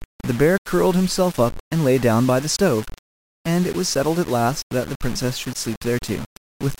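From start to finish the speech carries a coarse, grainy distortion that rises and falls with the voice, and quiet stretches turn gritty or sputter. That is low bit depth without dither, likely 5-bit rounding, leaving error only around 20 dB below the signal.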